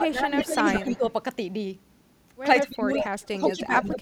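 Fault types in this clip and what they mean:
speech suppressed in double talk: The echo canceller was likely confused when both ends spoke at once, and with no way to tell the local talker from loudspeaker echo, it pulled everything down together. The speech here sinks in three stretches, from the start to 1.05 s, from 2.63 to 3.07 s and from 3.29 to 3.98 s. The dips deepen from about 10 dB early on to about 20 and then about 25 dB near the end.
echo leak: One side's echo canceller likely failed to strip out all of its loudspeaker sound, so part of it was returned down the line. A delayed copy of the speech trails the original by about 150 ms, between 149 and 156 ms. It appears in short scraps at 0.39 to 0.46 s, at 0.68 to 0.97 s and at 3.21 to 3.28 s. It returns at 3.46 s and runs to the end, where it is nearly as loud as the speech itself.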